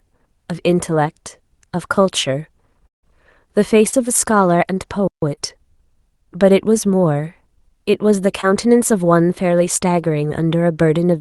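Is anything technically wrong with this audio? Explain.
Yes, there are several delivery faults in this speech, heard over a call path whose codec cuts everything above 12 kHz.

Long network dropout, 2.87 to 3.05 s: the audio stops arriving, the last sound trails on as a fading buzz, then goes silent before resuming with about 0.16 s lost. This is likely a network dropout.

Short concealed packet loss, at 3.89 to 3.97 s, 5.35 to 5.39 s and 8.41 to 8.45 s: gaps of 40 ms and 20 ms are filled by extending the preceding sound, giving brief smears or wobbles.

Playback stall, 5.07 to 5.22 s: the sound halts mid-flow for about 0.15 s, likely because the player ran short of data, then continues.

Time-compressed catch-up, 5.22 to 5.80 s: to clear the backlog, small pieces are cut and cross-faded, so the speech runs 1.25 times faster at normal pitch.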